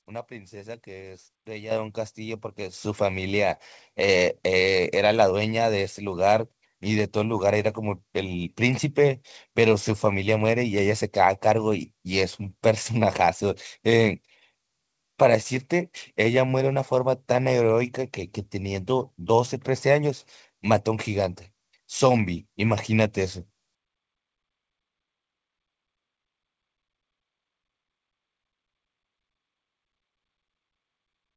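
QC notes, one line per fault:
1.71 s and 2.73 s: microphone volume stepped up. The input level jumps by about 9 dB at 1.71 s, then by about another 6 dB at 2.73 s, each change landing within roughly 10 ms. Speech and room noise rise together because the gain change happens at the capture device itself, before any processing, so nothing downstream can tell the two apart. This points to an automatic input-gain control acting on a low level. The call path's band limit of 8 kHz, consistent with a wideband call codec, does not hide either step.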